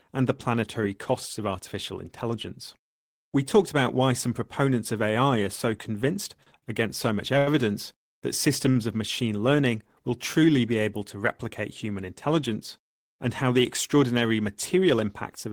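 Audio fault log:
6.43 s, 6.58 s, 7.38 s and 8.71 s: short stall from a late packet, sound held 30 to 85 ms each, two of them between "are so convinced" and "against so much", as the jitter buffer ran dry, nothing lost.
12.95–14.07 s: jitter buffer speed-up, pitch-period chunks trimmed, roughly 50 ms all told, so speech runs about 4% fast at unchanged pitch.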